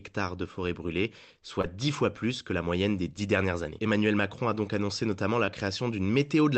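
Short concealed packet loss occurs twice in this speech, heard through a call codec whose band stops near 8 kHz: at 1.61 s, right after "de forêt brûlées soit", and at 5.45 s, after "donc annoncé notamment la". Each time about 20 ms of audio, which fits one lost 20 ms frame, failed to arrive, and the decoder extrapolated the preceding sound before crossfading back, giving a brief smear or wobble. A spectrogram shows the preceding sound carried smoothly across the gap.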